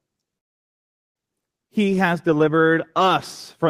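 At 0.37 s the speech just stops and you get dead silence until 1.18 s, about 0.78 s of nothing, and then it carries on right where it left off, with nothing lost. That's a call audio freeze, and the likely cause is packets getting held up in transit so the jitter buffer ran dry. There's no fading buzz or hiss bridging it, just a clean hole. The delay now sits about 0.78 s later.

Shortly after, around 1.45 to 1.49 s, there's a skip ahead. Roughly half a second of speech is simply gone, and the two sides are stitched together with only about 10 ms of fill. It's what happens when a chunk gets dropped, in transit or by the jitter buffer shedding backlog while later audio was already queued. It pulls back roughly 0.5 s of the latency the freeze added, and you hear it as an abrupt jump mid-flow.

From 1.69 s to 3.10 s there's a jitter buffer slow-down. The receiver was padding its reserve by repeating single pitch periods and bits of pauses over and over, adding 120 ms in total. 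The result is speech running at about 92% speed with the pitch unchanged, so sounds come out a little drawn out and stretched across that whole stretch rather than at any single point.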